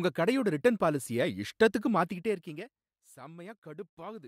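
From 1.97 to 3.03 s, a gain drop of about 20 dB is applied in unsmoothed steps, roughly forty a second, causing zipper noise, a fine ticking over the speech.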